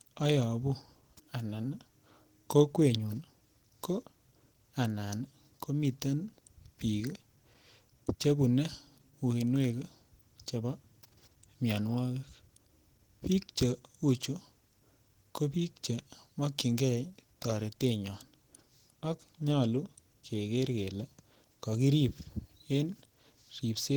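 Speech throughout, sounding hoarse and faintly robotic with coarse grain: Opus voice compression in hybrid mode, whose damage fits a bitrate near 16 kbps, coarsely coding the excitation.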